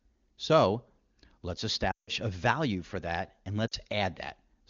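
Lost AMR speech frames at 1.91 to 2.10 s and 3.68 to 3.74 s: the wideband decoder repeated its last good settings at falling gain, so speech drops to near silence within two frames of a 160 ms gap, then dips briefly across 40 ms.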